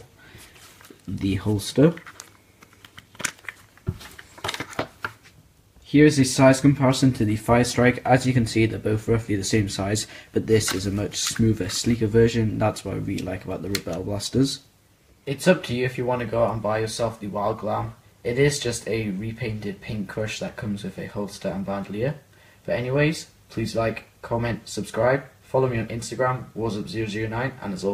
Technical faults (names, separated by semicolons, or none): none